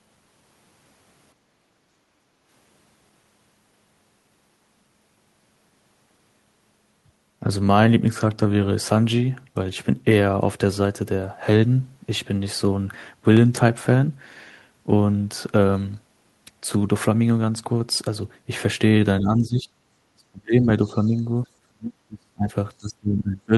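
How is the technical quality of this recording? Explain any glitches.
The recording has several audible faults, grouped early, mid-clip and in the final seconds.

Background gated by the echo canceller, from 1.35 to 2.47 s. The room sound dips by about 8 dB for roughly a second. The echo canceller clamped the microphone while its loudspeaker played, then released it. The ambience sinks, then comes back.

CD scratch ticks, between 13.37 and 14.58 s. Six short ticks arrive at about five per second, the longest about 1.5 ms. A disc blemish passed the laser once per revolution. The player could not rebuild those samples and patched them over.

Speech suppressed in double talk, at 19.2 to 19.71 s, 20.13 to 20.68 s, 20.84 to 21.47 s, 21.63 to 22.49 s, and 22.79 s to the end. The speech dips in pieces. Some dips are slight, and others are deep, near-cutouts. Both sides likely talked at once, and the canceller turned everything down.

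Other side's voice leaking through, at 21.03 to 21.08 s. A very faint scrap of a second voice appears, far below the main speech. It is likely residual loudspeaker echo that the canceller failed to remove from the microphone.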